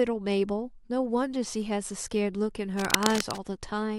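Cable scratch noise runs from 2.79 to 3.38 s: a dense, uneven burst of scratching and rustling about as loud as the speech itself. It is likely a worn cable or connector being moved, its contact resistance fluctuating rapidly and injecting noise.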